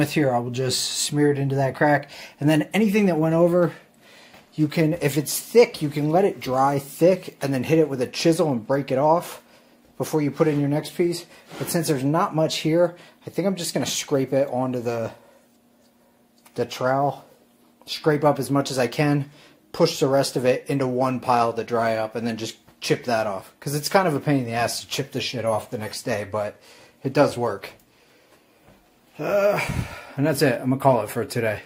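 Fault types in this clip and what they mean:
No audible technical faults.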